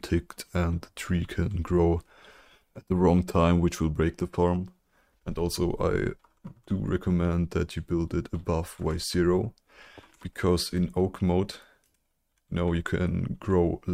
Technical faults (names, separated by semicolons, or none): none